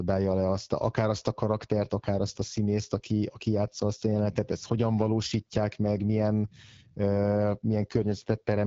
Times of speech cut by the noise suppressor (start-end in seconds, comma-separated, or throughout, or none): none